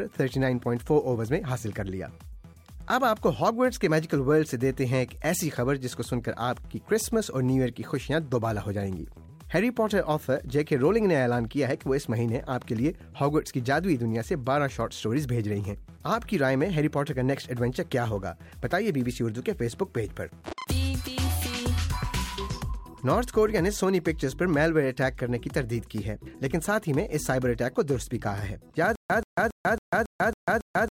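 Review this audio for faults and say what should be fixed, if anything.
From 28.95 s right to the end there's a stutter with silent gaps: a 131 ms burst repeats seven times, each followed by about 144 ms of dead silence, so it cycles every 276 ms. It's likely a stalled stream replaying its last fragment while the real audio is lost. Give the player a bigger buffer and proper underrun handling so it pauses cleanly rather than looping.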